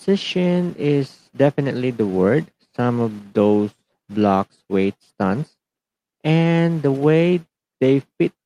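Nothing in the speech stood out as a technical problem on listening.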